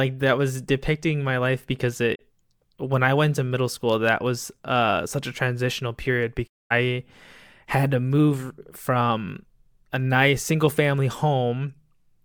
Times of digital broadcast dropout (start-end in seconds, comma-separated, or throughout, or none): 2.14-2.21, 6.46-6.72